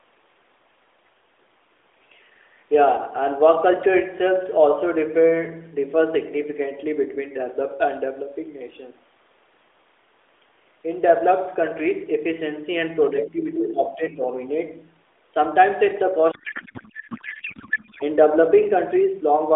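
Speech carried over an AMR narrowband mobile codec, band-limited to roughly 300 Hz to 3.6 kHz with light codec colouring, suffers a codec payload misread from 16.32 to 18.03 s. Octet-aligned AMR frames are being unpacked as bandwidth-efficient, so every field lands in the wrong bit positions and the decoder synthesises garbled noise and warble that barely tracks the speech. On a spectrogram the formant structure dissolves into smeared, disordered energy for that span, and the waveform envelope stops matching syllables.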